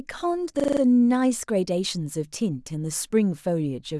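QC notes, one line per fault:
0.60–0.81 s, system hang loop: a 43 ms slice of speech repeats exactly five times at 23.4 Hz, giving a hard machine-gun stutter. The host stalled while playback kept cycling one ring buffer, which fits a 1024-sample buffer. No audio seems lost afterwards.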